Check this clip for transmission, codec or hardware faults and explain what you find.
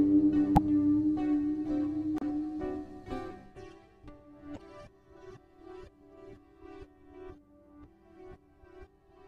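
There's a codec fault here: three short bursts of damaged data in a compressed stream, at 0.54 to 0.58 s, 2.18 to 2.23 s and 4.53 to 4.58 s, each roughly 45 ms long. In each spot the compressed bytes are corrupt, so the decoder misreads those frames, loses sync and hunts for the next valid frame header. You hear it as a brief chirp, squawk, click or short hole breaking through the sound.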